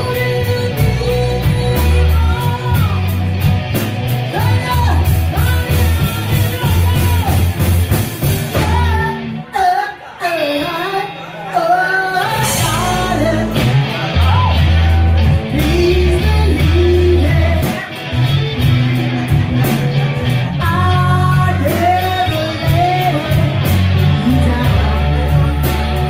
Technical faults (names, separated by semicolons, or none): none